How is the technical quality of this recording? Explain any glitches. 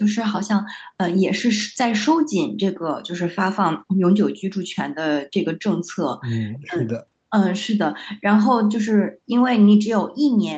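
Nothing here counts as a glitch; the speech sounds like a normal call recording, with the highs topping out at 8 kHz as you'd expect from a call link and nothing else worth flagging.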